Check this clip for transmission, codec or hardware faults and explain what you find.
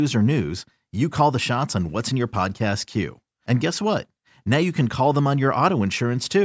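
Nothing stands out here: the speech comes through without any dropouts, glitches or other transmission or hardware trouble to point to.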